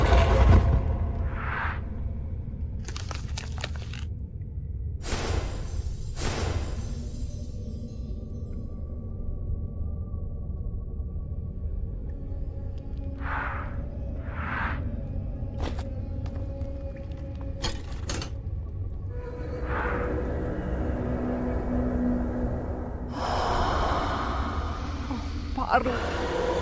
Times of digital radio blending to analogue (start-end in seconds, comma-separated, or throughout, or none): none